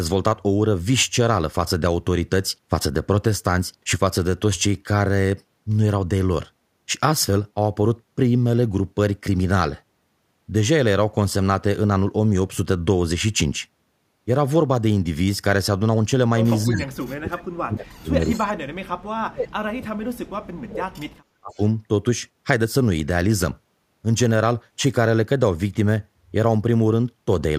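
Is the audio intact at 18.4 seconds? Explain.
No. The sound there sits inside a stretch of speech suppressed in double talk, from 16.65 to 21.02 s. The speech dips and breaks up in pieces, with the deepest cuts falling around 40 dB. This is likely because both ends talked at once. The echo canceller could not tell this talker apart from its own loudspeaker echo, so it pulled both down together.

An echo leak also lands right at this moment, from 18.34 to 18.39 s. A faint, delayed copy of the voice comes back about 286 ms late. It sits roughly 25 dB below the speech. The likely cause is a loudspeaker at the far end whose echo canceller missed part of what its microphone picked up. That leftover was sent back down the line.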